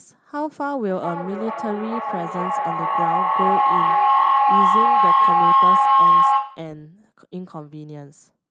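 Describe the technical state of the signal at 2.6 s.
At 2.6 s a whining tone near 1 kHz sounds over the speech, with a loop delay of roughly 0.4 s and peaking about 11 dB above it. This is feedback howl, lasting from 0.9 to 6.84 s: two devices share a room, and each microphone-to-loudspeaker trip adds gain.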